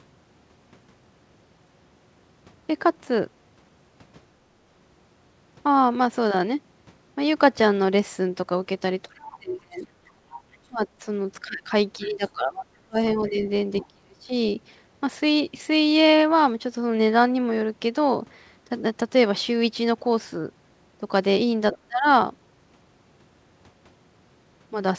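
From 9.07 to 9.89 s, both sides talked at once and the echo canceller likely could not separate them. The result is speech suppressed in double talk: the talker dips by roughly 30 dB for about 0.7 s. From 10.08 to 10.87 s, the other side's voice leaks through, likely because the far-end playback was not fully cancelled, leaving a faint second voice around 35 dB below the speech. Within that, from 10.17 to 10.26 s, the echo canceller gated the background hard while the loudspeaker played, so the room sound drops by about 8 dB for roughly 100 ms. From 10.68 to 14.31 s, speech is suppressed in double talk again, falling by up to roughly 30 dB across about two seconds in total. During that stretch, the other side's voice leaks through at 12.03 to 12.3 s, about 25 dB down, and at 12.96 to 13.86 s, a louder leak about 20 dB down. At 21.72 to 21.78 s, a brief scrap of the far-end voice breaks through about 15 dB below the speech. 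Right after, from 21.86 to 22.06 s, the talker is suppressed in double talk by roughly 25 dB. The band ends at 8 kHz, which fits a G.722 call path at 64 kbps.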